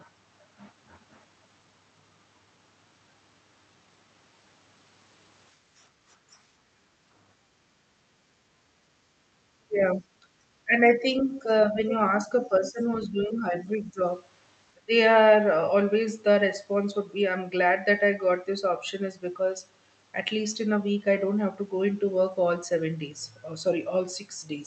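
From 5.56 to 8.95 s the background is gated by the echo canceller. While the far end was playing out of the loudspeaker, the canceller clamped the microphone path, so the room tone sinks by up to about 8 dB and recovers once the canceller releases. The dips add up to roughly three seconds within that span, heard as the ambient bed pumping down and back up.

Inside that window, at 6.31 to 6.36 s, a brief scrap of the other side's voice leaks through. It is very faint, around 35 dB below the near-end speech. The likely cause is residual echo: the canceller's adaptive filter did not fully model the loudspeaker-to-microphone path, so a short fragment of the far-end signal survived into the send path.

From 9.62 s onward the near-end speech is suppressed in double talk, in four episodes: 9.62 to 10.25 s, 10.65 to 11.93 s, 12.27 to 14.0 s, and 14.75 to 14.93 s. The deepest cuts come in the first and last episodes, roughly 25 dB and 20 dB. 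The middle two are shallower, around 10 dB, but last longer, about a second in total for the 12.27 s episode. The talker's level drops in chunks, with parts of syllables ducked or briefly missing. This is likely the canceller's nonlinear suppressor treating overlapping near-end and far-end speech as echo and attenuating both. Across all of this, the Opus call path band-limits the audio at 8 kHz.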